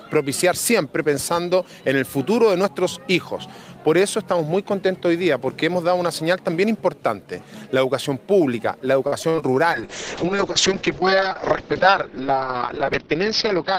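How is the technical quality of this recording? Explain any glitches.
The recording has three clear glitches, all in the last five seconds.

From 9.07 to 9.43 s there is repeated packet loss, giving a robotic sound. Short holes follow one another, five in this stretch, the longest about 49 ms. Each is patched by stretching the previous sound. Nearly 40 percent of the span is concealed, so it turns choppy.

From 9.73 s to the end comes a call bitrate drop. The encoder was starved of bits, and the audio top falls from 20 kHz to 6 kHz. That fits a fall from roughly 32 kbps to 6 kbps. The sound becomes muffled and coarse, with a watery roughness.

From 13.05 to 13.73 s there is a jitter buffer speed-up. The receiver held too much audio and trimmed tiny pitch-period slices, around 70 ms in all. Playback runs about 8 percent faster at unchanged pitch. It sounds slightly hurried.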